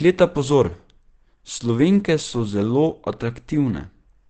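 From start to finish the speech carries Opus compression damage, and it is plainly audible: the sound is muffled and hoarse. Nothing reaches above 8.7 kHz, so a spectrogram shows a flat ceiling there with an empty band overhead. That wideband limit and the hoarse texture point to the encoder running in its speech mode at a low rate, likely around 16 kbps, trading bandwidth for detail.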